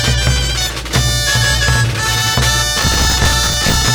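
The audio runs clean until 2.78 s, then breaks into processor overload crackle that lasts to 3.88 s. It's a gritty tearing laid over the sound, with the machine evidently missing one buffer deadline after another. Each miss replays a fragment of stale audio with hard edges, and the rate of the crackle fits buffers of around 10 ms, so something like fifty go wrong over that stretch. It stops once the load eases.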